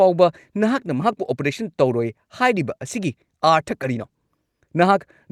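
No technical faults are audible anywhere in this recording.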